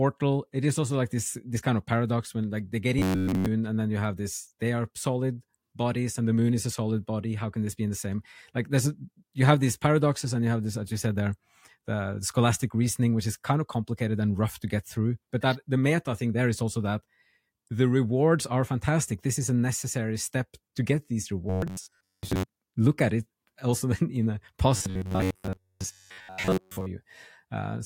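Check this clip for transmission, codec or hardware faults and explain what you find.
One transmission fault recurs: robotic sound from repeated short buffers, from 2.99 to 3.47 s (after "when like they get", before "and then you have"), 21.50 to 22.43 s (after "step to get these", before "look at it also") and 24.76 to 26.86 s. The sound becomes a rigid metallic buzz at 93.8 Hz, most likely because a buffer of about 10.7 ms was replayed instead of fresh audio. In the first event the buzz replaces the audio entirely, and in the later two it replaces most of it. On a waveform this appears as an identical cycle repeating every 10.7 ms. A spectrogram shows an evenly spaced comb of harmonics at multiples of 93.8 Hz.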